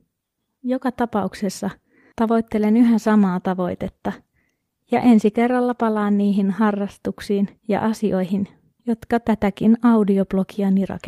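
From 2.71 s to 6.49 s the speech degrades in a call bitrate drop. The encoder shifts from a rate consistent with about 64 kbps to about 22 kbps, so coding turns coarse, highs are cut, and the speech sounds muffled and watery until "harrastuksiin ja asioihin jotka".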